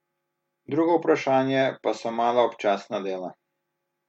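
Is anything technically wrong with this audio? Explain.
No, nothing in this speech recording stood out as a technical problem on listening.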